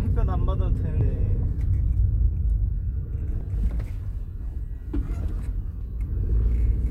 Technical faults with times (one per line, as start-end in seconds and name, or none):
1.01 audio missing between chunks
3.41 audio missing between chunks
5.81 audio missing between chunks